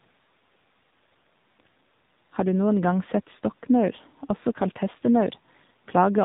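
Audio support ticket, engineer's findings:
AMR narrowband mobile codec, throughout. Nothing above 4 kHz, so the sound is dull and boxed-in. Damage is plainly audible: buzzy, synthetic texture from the vocal-tract model rebuilding each 20 ms frame from a few pulses. The degree of buzz fits a low AMR-NB mode near 7.4 kbps. Probable component: mobile leg of the call, 2G/3G speech path.

Echo leak, 3.47–3.59 s. A brief, very faint delayed copy of the speech sits about 164 ms behind the original, far below the main signal, just one short scrap. Likely cause: the far end is playing the call on a loudspeaker, and its echo canceller let a residue of what its microphone picked up leak back into the send path.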